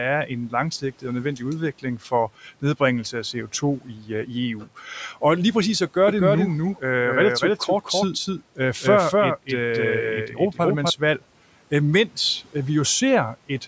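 From 3.81 to 4.1 s, after "nedbringelse af" and before "øh i", the noise suppressor cuts speech, mistaking it for noise. The sound dips by up to about 12 dB and goes faint.

A shorter cut follows at 4.61 to 4.78 s, dropping about 11 dB.

From 6.08 to 10.9 s, after "lige præcis at", a doubled audio track appears. A second copy trails roughly a third of a second behind, at about equal level. It is dry and starts and stops abruptly. A slower second capture path is the likely cause.

Inside that stretch, from 10.28 to 10.59 s, the suppressor again swallows speech, by up to about 10 dB.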